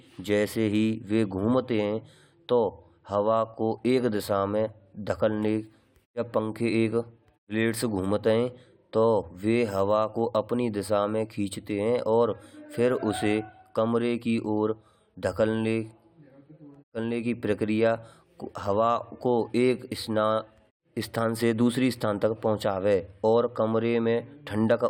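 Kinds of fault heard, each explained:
No technical fault can be heard anywhere in this speech recording.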